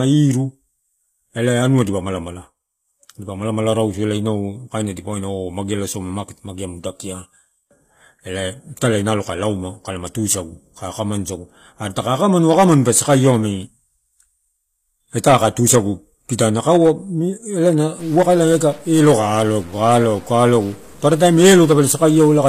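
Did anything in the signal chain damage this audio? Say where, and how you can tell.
Yes. The codec stage has left its mark across the whole recording, which most likely went through HE-AAC at a low rate, consistent with roughly 24 kbps. The damage is plainly audible. The upper band is rebuilt rather than transmitted, so sibilants come out gritty and metallic, and nothing is present above 14.9 kHz. This is spectral band replication: the encoder codes only the lower spectrum and copies those bands upward under a coarse envelope.

The second fault, a stuck bit, sits at the converter or sample-data path. From 17.99 s to the end at 22.49 s, the speech picks up distortion, and the gaps between phrases fill with noise instead of going quiet. The likely cause is one data bit held at a fixed value by a broken line or converter. Roughly half the samples are then offset by that bit's weight, and the bit's effect changes with the sign of small values near zero, which adds noise to the pauses.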